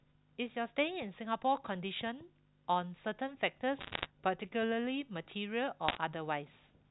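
Bit errors on a digital phone line corrupted scattered samples in this telephone-band speech, at roughly one to two percent of bits, leaving sharp ticks and crackle from 3.80 to 4.06 s and from 5.88 to 5.98 s.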